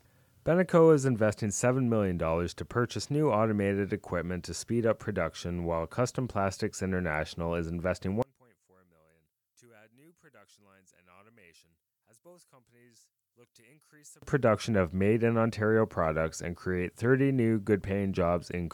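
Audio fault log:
8.22–14.22 s one channel inverted: likely a polarity flip on one side, so shared content cancels in mono and the sound drops by about 33 dB.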